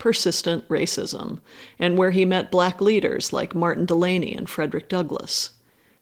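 Nothing here calls for comment on the technical side: it's a stretch of speech carried through Opus voice compression, with no faults to point to anywhere along the way.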